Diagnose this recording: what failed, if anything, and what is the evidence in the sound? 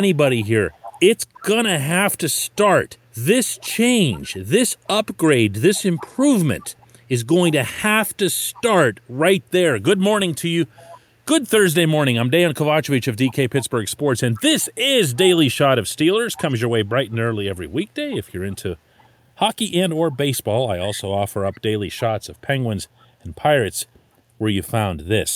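Echo leak in call processing: a faint copy trails the speech by 331 ms at 0.4, 3.55, 8.54, 9.97, 13.29, 16.34, 18.51 and 21.53 s, likely a far-end canceller missing loudspeaker pickup.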